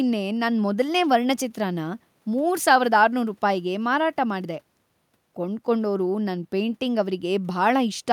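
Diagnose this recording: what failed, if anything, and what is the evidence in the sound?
Nothing failed at any stage; the only thing under the speech is the room's own background noise, sitting about 45 dB down, which belongs to the recording and not to the system.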